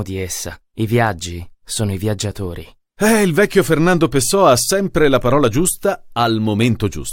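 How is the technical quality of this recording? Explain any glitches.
Nothing here trips me up technically, since I can't pick out any glitch anywhere in the recording.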